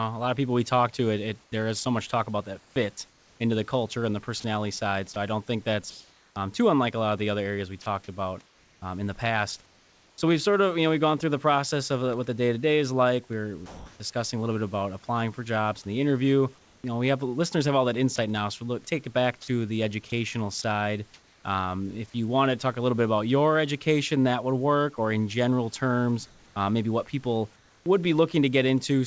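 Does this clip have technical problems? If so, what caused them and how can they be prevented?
Yes. Sound chopped by the voice detector appears twice. From 1.44 to 8.82 s, after "talk to it it" and up to "um in the past", about 1.16 s in total is replaced by comfort noise in several holes. From 16.58 to 22.14 s, between "jobs and the interview" and "you want to talk", about 0.4 s is replaced the same way. The likely cause is the sender's voice detector repeatedly judging quiet parts of speech as background, switching transmission off and on so the receiver fills each gap with synthetic noise. Preventing it means making the detector less aggressive or adding hangover time so quiet syllables keep being sent.

Sound dropped by the voice detector occurs from 13.66 to 14.00 s. About 0.34 s is filled with steady comfort noise, and roughly 0.14 s of actual speech is lost inside that span. The likely cause is the detector mistaking a quiet stretch of speech for background and stopping transmission until speech triggered it again. 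Lowering the detection threshold or extending the hold period after speech would prevent this kind of dropout.

Comfort noise in place of the background appears from 27.56 to 27.86 s, right after "uh maybe what people". For about 0.3 s, the real room background, which sits about 34 dB below the loud parts, is swapped for smoother synthetic noise about 4 dB quieter. This is likely discontinuous transmission during a pause, with the receiver generating noise roughly matched to the background. Disabling discontinuous transmission, or improving the comfort-noise level matching, would stop the audible background change.

The band limit at 8 kHz fits a wideband call codec such as G.722. The room noise, about 35 dB below the speech, belongs to the recording itself.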